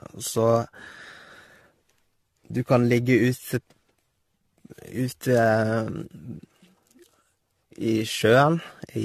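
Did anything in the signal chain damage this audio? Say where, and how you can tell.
Yes, generation loss at the codec stage throughout: swirly, hollow speech with blurred attacks and nothing above 14 kHz, too smeared for one AAC encode, likely from roughly seven re-encodes.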